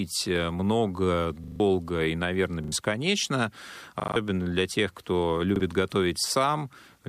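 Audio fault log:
1.44–1.6 s, 2.64–2.72 s (after "и наверное"), 4.0–4.16 s, 5.56–5.6 s: repeated buffer. Each is a hard-edged stutter where a slice, consistent with a 40 ms buffer, replays one to four extra times because fresh audio arrived late.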